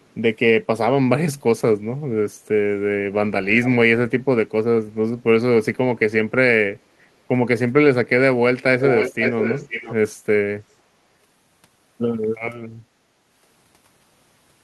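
Echo leak at 0.02 s, 3.62 s and 8.79 to 9.94 s. Delayed speech returns 331, 416 and 514 ms late. It is faint at first, then nearly full level. A loudspeaker end's echo canceller likely missed it.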